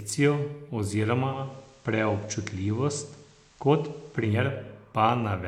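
At 1.18 s the speech blends from digital radio to analogue. The receiver lost the digital signal and cross-faded to the station's FM broadcast. The fade takes about 0.39 s. A soft hiss comes up, roughly 35 dB below the speech. The level does not change. At 4.53 s the radio blends back to digital, and the hiss goes.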